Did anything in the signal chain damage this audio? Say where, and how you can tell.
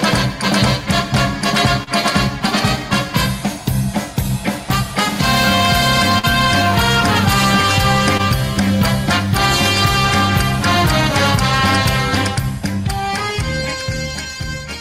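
Yes, the damage happened on the network side. There are two spots of short concealed packet loss, at 1.83 to 1.89 s and 8.17 to 8.21 s. Each is a brief smear where the audio briefly stops being itself. At 1.83 s about 40 ms of the original is gone and roughly 33 ms was papered over. At 8.17 s it's a smaller 20 ms patch over 20 ms missing. The receiver stretched the last bit of sound to cover the hole, then crossfaded back in.

The bigger hit is a burst of packet loss at 6.19 to 6.25 s. Here a run of data arrived too late or not at all. The concealer held the last sound for about 45 ms, letting it sag into a buzzy or hissy tail as it ran out of anything real to extend. When the stream picks up again, about 40 ms of the original has dropped out entirely, so the audio resumes further on rather than as a clean continuation.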